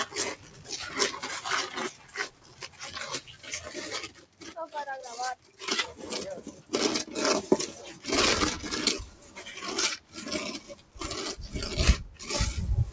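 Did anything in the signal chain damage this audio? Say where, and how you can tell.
Yes, at the call-processing stage: a speech noise suppressor was left on for these sounds. It treats steady tones and decays as noise, so the level keeps ducking and recovering by about 15 dB across the clip, giving a pumping, fluttery quality.

You can hear the sound cut by the noise suppressor at 0.06–0.7 s, 1.91–4.43 s, 5.35–5.61 s, 6.48–6.72 s, 9.07–9.42 s and 9.98–10.97 s. Held parts sink by about 9 to 12 dB and tails cut short, while attacks pass. The band topping out at 8 kHz is just the call's bandwidth.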